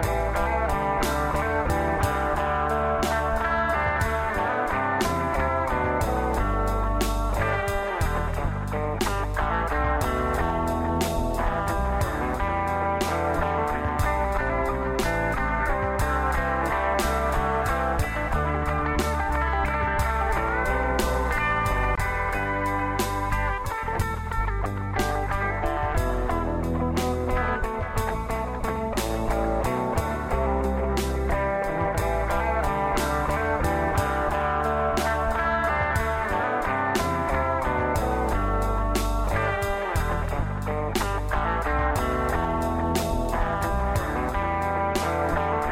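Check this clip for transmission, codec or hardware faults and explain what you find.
No faults turn up anywhere in the clip. Nothing in the sound points to trouble in transmission, encoding or the hardware chain.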